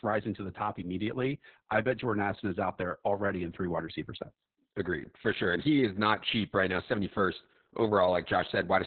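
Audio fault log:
Throughout: Opus voice compression, speech confined below 4 kHz and coarsely coded by SILK, sounding heavily muffled, hoarse and slightly robotic, pointing to a 6 kbps rate.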